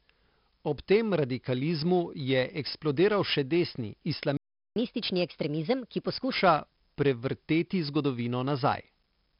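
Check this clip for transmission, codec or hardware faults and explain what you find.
Three faults are present in the speech: codec damage running the full length, plus a dropout and a speeded-up stretch just after it.

4-bit ADPCM compression, throughout: each sample is coded as a coarse 4-bit step from a predicted value, with the step size adapting as it goes. At 44 kbps this fits roughly an 11 kHz sample rate, and nothing is present above 5.3 kHz, so the speech sounds dull. The damage is heavy: a gritty hiss rides on every louder syllable, and sharp onsets smear where the step size lags behind the signal.

Playback stall, 4.37 to 4.76 s: the speech cuts to silence mid-flow for about 0.39 s, then resumes. The likely cause is the player running out of buffered data or its thread being blocked, so nothing reached the output until it recovered. The gap is clearly audible as a hole in the audio.

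Catch-up at higher speed, 4.76 to 6.32 s: once playback resumes, the player works through its backlog by resampling at 1.25 times normal speed to recover the lost time. Because speed and pitch are tied in that process, the speech runs noticeably faster and sits about four semitones higher for roughly 1.6 s. It then drops back to normal pace and pitch.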